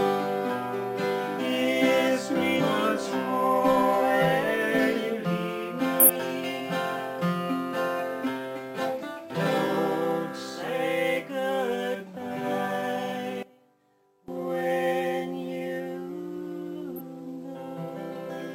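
Compressed frames skipped at 1.35, 2.56, 5.99 and 16.95 s: whole 46.4 ms frames go missing, so the sound jumps ahead by roughly 0.15 to 0.3 s. From 13.43 to 14.28 s the centre of the sound collapses by about 20 dB to a faint residue, likely one channel inverted, cancelling common content in mono.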